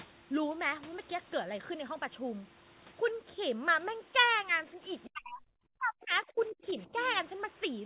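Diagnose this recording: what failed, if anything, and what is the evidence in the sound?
Speech suppressed in double talk, from 5.07 to 5.57 s and again from 5.77 to 6.87 s, at the call-processing stage. In both stretches the speech drops sharply, by roughly 40 dB at its deepest. The likely cause is an echo canceller that heard both sides talking at once, could not separate this talker from loudspeaker echo, and attenuated everything. The 4 kHz band limit fits G.711 A-law.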